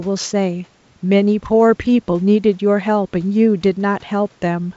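Nothing here stands out as a fault: the faint room noise sits about 40 dB under the speech, and the G.722 wideband telephone coding runs as intended, with the sound topping out around 7.7 kHz.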